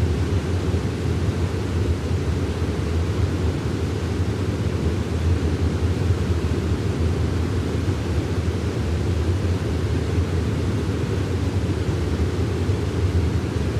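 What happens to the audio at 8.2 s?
A doubled audio track runs through the whole clip, including 8.2 s, likely from the sound being captured a second time along a slower path. A full-band copy trails the original by about a fifth of a second, roughly 5 dB quieter, giving a dry, echo-like repeat with no room decay.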